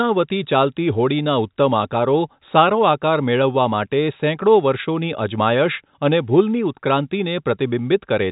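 No technical faults are present in the speech, which comes through G.711 telephone coding with its usual narrow band and no energy above 3.8 kHz.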